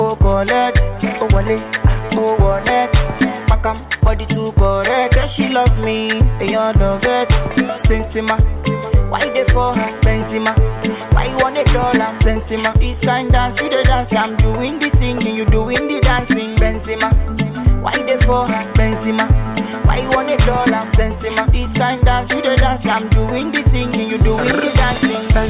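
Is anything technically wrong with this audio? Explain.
No, nothing technically wrong can be heard in this audio. No path is listed to comment on, so there is nothing further to single out.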